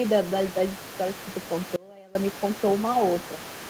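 Most likely the echo canceller failed to fully remove the far end's loudspeaker playback from the microphone, so the other side's voice is leaking through for the whole clip. It sits around 20 dB below the main speech, a faint second talker underneath.

From 1.76 to 2.15 s, the wanted signal was likely lost while the path after the break stayed live, an audio dropout to a faint residue. For about 0.39 s the speech cuts out abruptly, leaving only a faint sound roughly 25 dB down.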